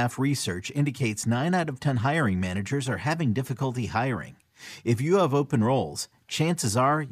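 No faults detected in the speech recording; nothing technical needs flagging.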